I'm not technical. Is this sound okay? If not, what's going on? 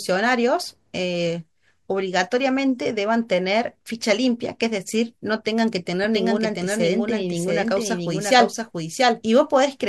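No. From 6.04 s on there's a doubled audio track: a slightly quieter copy trails about three-quarters of a second behind, likely picked up twice.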